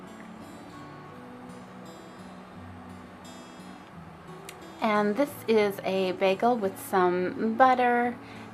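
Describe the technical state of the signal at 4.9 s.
At 4.9 s the signal is intact, with no audible fault at that moment.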